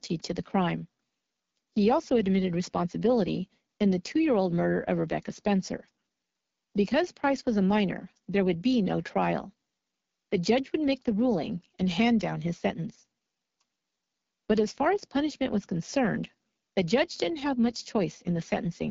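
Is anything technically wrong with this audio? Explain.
Yes. Throughout the speech, AMR wideband (HD Voice) codec damage is plainly audible: a rough, raspy texture and nothing above 7.5 kHz. The codec models speech with a pulse-driven vocal tract filter up to 6.4 kHz and fills the band above with shaped noise. The roughness fits its low 8.85 kbit/s mode.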